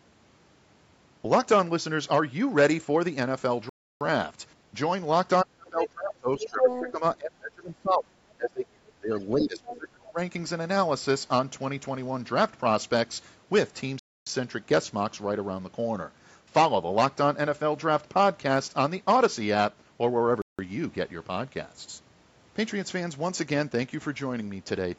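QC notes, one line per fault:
3.69 s, 13.99 s and 20.42 s, Bluetooth stall: the sound cuts to dead silence for 0.32 s, 0.27 s and 0.17 s, then resumes. The likely cause is radio interference delaying packets so the headphones' buffer emptied and playback halted until retransmissions arrived. On a waveform each gap is a flat line with hard edges. A spectrogram shows clean vertical blank columns across all frequencies, with no fade in or out.
5.45–8.13 s, 8.38–9.11 s and 9.33–10.18 s, speech suppressed in double talk: the talker's level sinks, at worst roughly 30 dB down (about 25 dB in the last stretch). About two seconds are affected in the first span and under a second in each of the others. This is likely an echo canceller, unable to tell the talker from loudspeaker echo while both sides spoke, attenuating everything. The waveform shows ragged, pumping envelope dips. The spectrogram shows energy fading in patches.
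5.69–5.87 s, 6.43–6.92 s and 9.19–9.23 s, other side's voice leaking through: a second voice intrudes. It is well below the talker in the first spot, slightly louder than the talker in the second, and only a faint scrap in the third. This is likely residual loudspeaker echo the canceller failed to remove from the microphone. On a spectrogram it appears as a second harmonic pattern overlapping the talker's. The waveform shows extra irregular bursts, the first two inside the suppressed region.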